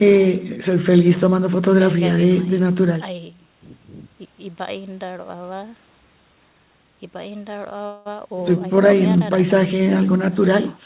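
From 7.86 to 8.08 s a fading buzz holds the speech, which then resumes intact: a call audio freeze, likely from late packets emptying the jitter buffer.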